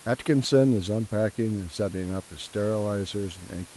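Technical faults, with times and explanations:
No technical faults: the room noise sits about 22 dB below the speech, and the Opus call path at 32 kbps limits the audio to a 12 kHz bandwidth as expected.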